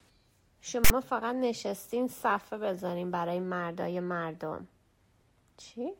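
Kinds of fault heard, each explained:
File tags played as audio: for about 61 ms, from 0.85 to 0.91 s, a chunk of tag data gets decoded as though it were samples, punching a hard-edged burst straight into the speech. The text part comes out as a loud, raspy buzz that sits lopsided, offset to one side of zero, since character bytes cluster in a narrow range. The zero padding after it just reads as a stretch of dead silence before the speech picks back up.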